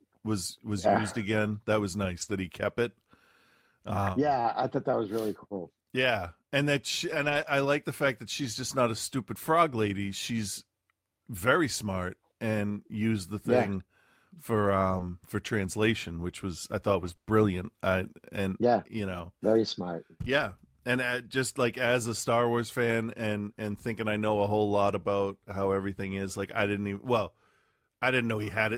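Right after "was was yeah used", from 1.41 to 1.47 s, there's a lost packet rebuilt from error correction: a couple of packets went missing, and the decoder played the low-bitrate copies carried in the following packets instead of leaving a hole. So you get no dropout, just a short patch that sounds rougher and noisier. The same thing happens at 2.21 to 2.31 s, just before "he kept it", covering about 60 ms. The longest one is at 7.09 to 7.51 s, where about 220 ms is rebuilt that way.

Between 14.97 and 17.27 s, ending just before "I and yeah you", there's a stretch of scattered short gaps. Packets were lost or arrived late one at a time, and the receiver patched each small hole by carrying the last bit of sound forward. There are roughly four of them, none longer than about 20 ms, so the audio stays clear apart from brief ticks and little smeared hiccups dotted through that span.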